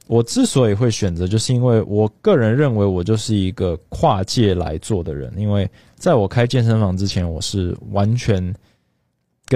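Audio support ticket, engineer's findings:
Damaged data in a compressed stream, 7.06 to 7.12 s. Corrupt bytes in the compressed speech stream; decoder misreads the affected frame, loses sync, hunts for the next valid header. Heard as a brief blip of about 60 ms breaking the speech. Probable component: file or transport layer upstream of the decoder, not the decoder itself.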